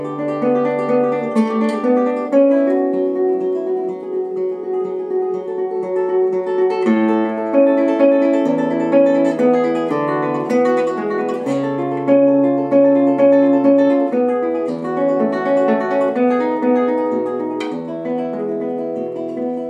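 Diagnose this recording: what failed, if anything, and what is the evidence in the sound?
Nothing failed here: the recording shows no audible fault at any stage from capture through playback. There is no evidence in the sound that points to a failing stage or mechanism.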